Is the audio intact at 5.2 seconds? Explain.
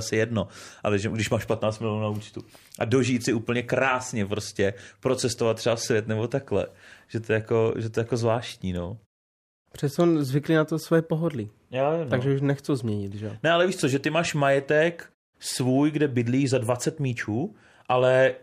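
Yes, the speech is intact at 5.2 seconds, with no fault at that moment.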